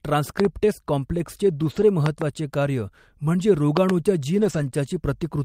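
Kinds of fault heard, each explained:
Loud pop: There are three short bursts, and each is a double pop, at 0.40 to 0.47 s, at 2.06 to 2.24 s just before "कार्य म्हणजे", and at 3.77 to 3.92 s right after "कार्य म्हणजे". They sit well above the speech, with the last pair the loudest, and the talking carries on underneath. It sounds like a voltage spike hitting the line, most likely from a plug, a switch or a static discharge.
Lost packet rebuilt from error correction: Two stretches of speech get briefly rougher and noisier without ever dropping out, 120 ms at 1.61 to 1.83 s and 140 ms at 4.37 to 4.63 s. That fits several separate lost packets, roughly six and seven 20 ms frames. Each packet after a loss carried a low-bitrate backup copy of it, and the decoder played those copies, which keeps the audio continuous but lowers its quality for a moment.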